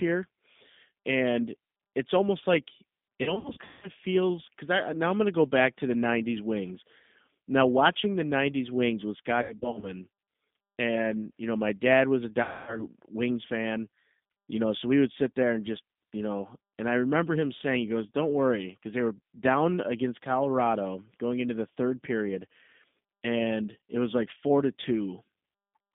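Throughout, the speech sounds narrow, slightly rough and synthetic, confined to roughly 150 Hz to 3.6 kHz: that is the G.729 codec at 8 kbit/s. At 3.23 to 3.90 s, after "and it's almost like" and before "feels because I now", at 9.42 to 9.91 s, and at 12.43 to 12.86 s, after "my dad was a", the sound smears into buzzy, fading tones. These are VoIP packet loss concealed by the speech codec, with the decoder stretching its last frames over the gaps.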